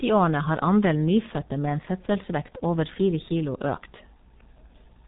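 G.723.1 codec damage runs through the whole clip: the speech is heavily muffled and hoarse, with consonants smeared together. Nothing survives above 3.8 kHz, and the coarse, slowly updated voice modelling fits a very low bitrate near 6 kbit/s.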